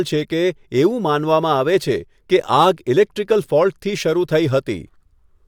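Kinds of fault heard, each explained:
No technical faults can be heard in this recording.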